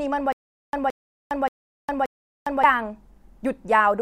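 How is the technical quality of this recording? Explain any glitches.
The recording has one clear glitch, a stutter with silent gaps from 0.32 to 2.64 s. A 170 ms burst of speech repeats four times, each followed by about 407 ms of dead silence, a 578 ms cycle. This likely comes from a stalled stream replaying its last fragment at each retry, so the intervening audio is lost. A waveform shows identical blocks separated by flat lines; a spectrogram shows matching columns between empty black gaps.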